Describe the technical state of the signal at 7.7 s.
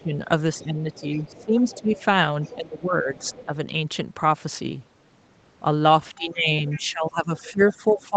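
At 7.7 s the speech is pulled down in level and sounds thinned and intermittent, sinking as much as about 15 dB. This is likely speech suppressed in double talk, from 6.13 s to the end at 8.16 s, where the echo canceller mistakes the talker for loudspeaker echo and attenuates both.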